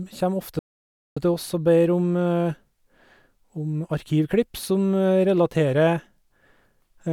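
A playback stall from 0.59 to 1.17 s cuts the speech off mid-flow into about 0.57 s of silence before it resumes. The player most likely ran short of buffered data or had its output thread blocked, leaving nothing to send to the output until it recovered.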